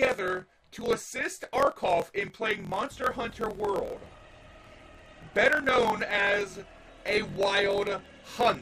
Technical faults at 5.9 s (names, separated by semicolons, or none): block size mismatch (truncated)